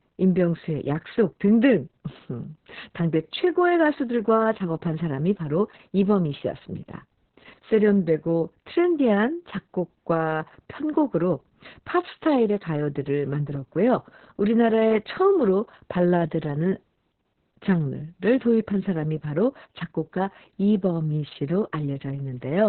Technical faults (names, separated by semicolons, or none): Opus voice compression